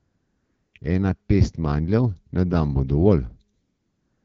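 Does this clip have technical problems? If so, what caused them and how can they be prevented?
Yes. AMR comfort noise fills 0 to 0.73 s, 0.79 to 0.81 s, and 3.53 to 4.25 s after "na dan bo dovolj". The sender judged these stretches silent and stopped sending speech frames, so the receiver synthesised smooth noise from a coarse level and spectrum estimate. On a spectrogram, these stretches show flat, uniform noise with abrupt edges. On a waveform, they appear as an even low-level band. Disabling discontinuous transmission or lowering the voice activity threshold prevents this.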